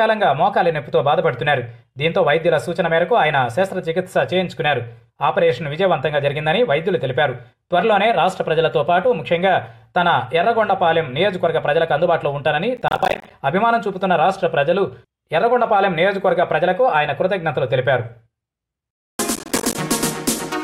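The audio has two bursts of processor overload crackle, at 12.77–13.31 s and 19.35–19.75 s. Buffers of around 10 ms repeatedly miss their deadline and drop to silence, producing gritty tearing. The waveform shows many short hard-edged gaps, and the spectrogram shows dense vertical broadband stripes.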